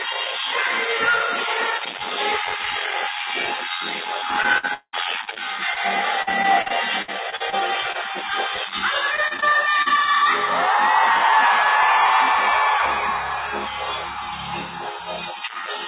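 Repeated packet loss (robotic sound) first appears from 4.42 to 5.38 s. Five gaps, the longest 190 ms, were bridged by extending the last received sound, so about 30% of that stretch is synthetic. The same fault returns from 6.22 to 7.54 s (nine gaps, none over 59 ms, about 20% filled) and from 9.16 to 9.92 s (seven gaps up to 36 ms, about 18%). Each run sounds choppy, with bits of the sound missing. Throughout, the call path cuts everything above 4 kHz, which fits a G.711 mu-law codec.

Short concealed packet loss occurs at 5.74 to 5.78 s and again at 7.92 to 7.96 s. Each time about 20 ms of audio arrived too late for the decoder, and the receiver patched the hole by continuing the preceding sound before blending back into the real signal. The result is a brief smear or wobble, and a short transient inside the gap can drop out entirely.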